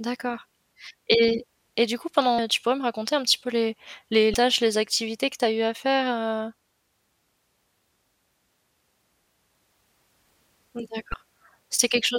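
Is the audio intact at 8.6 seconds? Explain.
Yes, the speech at 8.6 seconds comes through intact, with no dropout, click, distortion or other fault audible at that moment.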